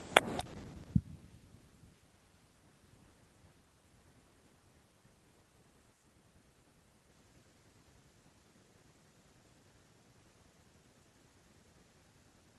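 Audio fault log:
No fault is heard in this speech clip.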